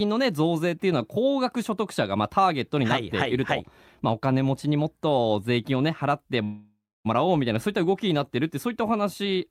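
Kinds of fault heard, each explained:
Call audio freeze: from 6.43 to 7.07 s the last sound stretches, fades, then goes silent for 0.27 s, likely from delayed packets, before resuming with nothing lost.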